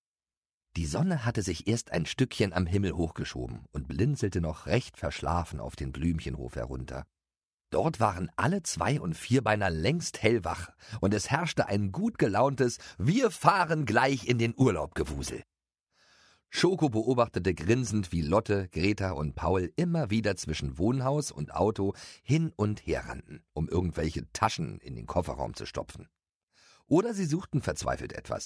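Nothing stood out as a technical problem anywhere in the recording on listening.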